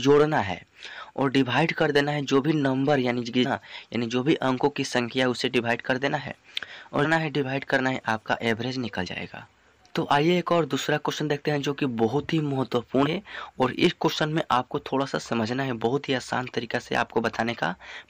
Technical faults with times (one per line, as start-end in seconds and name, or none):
3.44-3.46 damaged data in a compressed stream
7.04-7.06 damaged data in a compressed stream
9.06 damaged data in a compressed stream
13.05-13.07 damaged data in a compressed stream